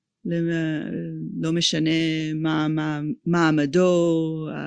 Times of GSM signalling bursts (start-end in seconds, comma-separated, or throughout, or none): none